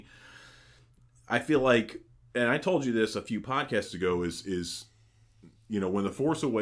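From 3.85 s, just after "you this a few", the speech turns slower and lower. It stays that way to the end of the clip. This is a wrong sample rate fault. The samples are clocked out more slowly than they were captured, with no resampling. Speed and pitch fall together. The audio runs at about 0.92 times normal speed and drops about 1.5 semitones. That ratio fits 24 kHz material played at 22 kHz.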